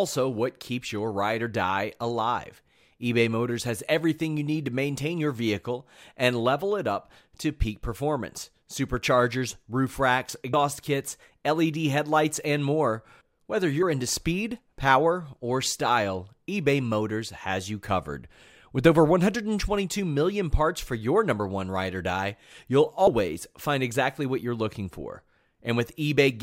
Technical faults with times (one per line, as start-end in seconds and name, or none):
10.53 compressed frames skipped
13.82 compressed frames skipped
23.07 compressed frames skipped